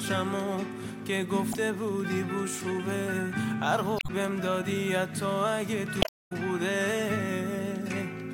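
Damaged data in the compressed stream makes the decoder misread frames and lose sync, producing brief chirps or squawks at 1.51–1.55 s, 3.96–4.10 s and 5.99–6.32 s.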